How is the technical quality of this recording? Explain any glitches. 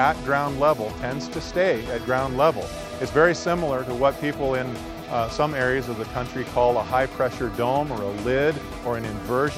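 No glitches or technical faults can be heard here.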